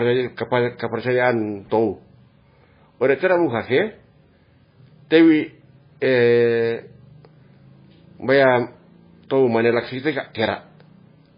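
From start to end, the speech carries heavy damage from likely MP3 compression. Nothing is left above 5 kHz, so the treble is cut off flat and the sound turns dull. Weak frequency lines drop in and out from frame to frame. That gives a watery, swirling texture, with metallic chirps on s sounds. Attacks smear. The depth of the damage fits a very low bitrate, around 16 kbps.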